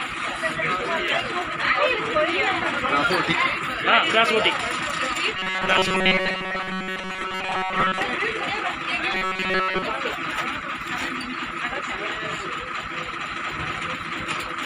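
At 1.08 s a sharp snap cuts across the sound, an electrical switching spike, likely a nearby switch or static discharge arcing into the audio line. From 5.37 to 8.02 s the audio turns into a rigid, metallic buzz at 188 Hz: robotic sound from repeated short buffers, likely caused by audio arriving too seldom, so a block of about 5.3 ms is looped and most of the real sound is skipped. It returns from 9.13 to 9.83 s, this time with the whole stretch made of repeats. Another brief snap, a second electrical switching spike, lands at 10.88 s.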